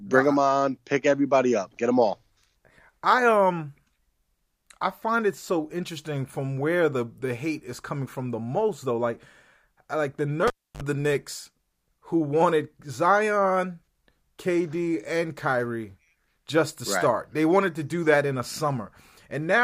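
At 10.47 s, right after "like the", the speech is interrupted by a cable pulled and plugged in, lasting until 10.82 s. A sharp pop opens a gap of about 0.30 s of near silence. Then comes a short burst, around 50 ms, of 50 Hz mains buzz as only the plug tip makes contact, and a second pop as the signal returns. That hum burst and the paired pops set this apart from a simple dropout or mute.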